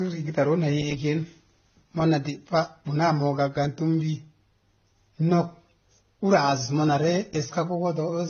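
Throughout, the speech was likely passed through two lossy codecs in turn, the sound pointing to AAC-LC followed by HE-AAC near 24 kbit/s. This transcoding between lossy codecs leaves nothing above 6.8 kHz, and both stages' artefacts are heard layered together.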